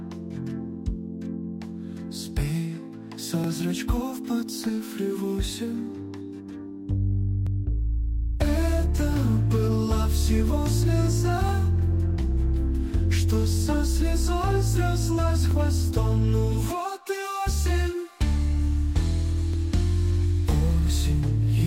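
Short stutters land at 3.44–3.47 s, 7.47–7.49 s, 15.51–15.53 s and 19.54–19.56 s, each replaying 23 ms of sound. This is overlapping chunks: the audio was handled in 4.0 s chunks, and each began slightly before the previous ended.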